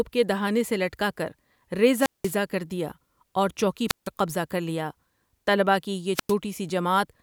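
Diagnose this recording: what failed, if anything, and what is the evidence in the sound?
Wireless microphone squelch dropout in the analogue radio link: at 1.93–2.37, 3.88–4.08 and 6.13–6.34 s, hiss swells as the FM signal fades, then squelch mutes for 190, 150 and 100 ms. That static lead-in distinguishes it from clean digital packet-loss gaps.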